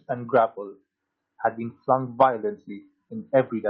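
Nothing goes wrong anywhere in this bit of speech, so there's no fault to point out.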